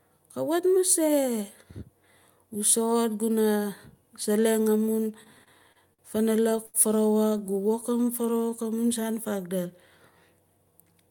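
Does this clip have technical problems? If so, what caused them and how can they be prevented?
Yes, there are a few network-timing problems in this speech.

From 5.23 to 6.01 s and again from 6.41 to 6.76 s you get repeated stalls (stutter). Packets weren't arriving fast enough, so the jitter buffer kept running dry. The receiver stretched the last sound to cover nine gaps in all, the longest 52 ms and 81 ms, so it drags and stutters without losing anything. A larger or adaptive jitter buffer on a steadier connection would prevent this.

Between 7.38 and 7.97 s there are scattered short gaps, about seven tiny holes of roughly 10 ms or less, where packets were lost or late. Each was patched by continuing the previous sound, giving brief ticks and smears. Better network quality or forward error correction would prevent these.

Overlapping that, from 7.43 to 8.65 s, there's a jitter buffer slow-down. 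The buffer was low, so the receiver repeated pitch periods and slivers of pause, adding 124 ms. The audio runs at 90% speed with unchanged pitch and sounds drawn out. Steadier packet delivery would prevent it.

Right at the end, 10.57 to 11.07 s, the opposite happens: a jitter buffer speed-up. Too much audio had built up, likely after delayed packets arrived in a bunch, so the receiver cut around a tenth of a second in small pieces. It plays at 115% speed and sounds hurried. Reducing bursty delivery on the network path would prevent this.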